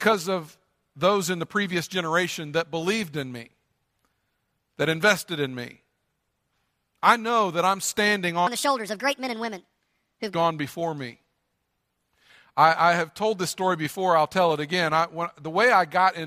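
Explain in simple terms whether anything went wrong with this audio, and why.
A section at the wrong speed runs from 8.47 to 10.35 s, after "know that I'm standing" and before "before me". It plays 1.43 times too fast, so the speech sounds rushed and jumps roughly seven semitones higher, likely from being matched to the wrong clock.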